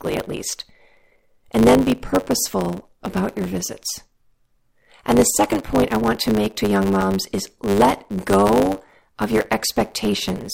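Throughout the recording, one stage hands over blocks longer than the next stage reads, so the tail of every block is discarded: a block size mismatch (truncated). The speech carries a 100 Hz buzz at the block rate and runs about 1.09 times fast, with its timbre unchanged.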